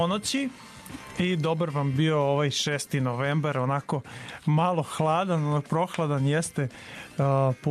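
No technical faults can be heard anywhere here.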